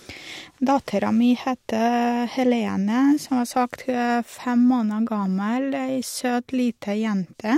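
No technical faults can be heard anywhere in this speech recording. The signal holds steady throughout, with no moment that stands apart from the audio around it.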